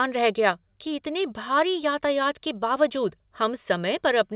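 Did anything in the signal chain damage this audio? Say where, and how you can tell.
No, nothing here counts as damage: the speech came over a call path whose telephone-style band stops at 4 kHz, the usual limit of a G.711 mu-law call, and that's simply how that path is meant to sound.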